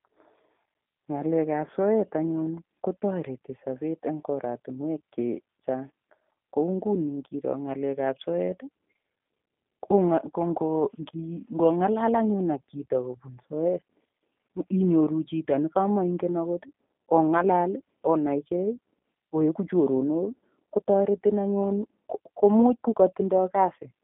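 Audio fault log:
throughout, G.729 codec: The speech has the rough, slightly synthetic texture of a low-rate VoIP coder, consistent with 8 kbit/s G.729. Each 10 ms frame is rebuilt from a vocal tract filter, a pitch predictor and a few pulses, so fine detail is lost and the damage is plainly audible. A spectrogram shows a hard ceiling near 3.8 kHz with nothing above it, energy confined to roughly 200 Hz to 3.6 kHz, and smeared, blotchy harmonics.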